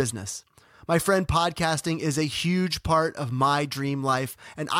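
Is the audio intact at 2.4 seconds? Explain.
Yes, at 2.4 seconds the speech runs cleanly, with no dropout, click, distortion or other fault at that moment.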